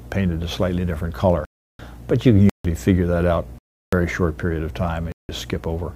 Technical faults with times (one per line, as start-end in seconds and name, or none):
1.45-1.79 block of digital silence
2.49-2.65 block of digital silence
3.58-3.93 block of digital silence
5.12-5.29 block of digital silence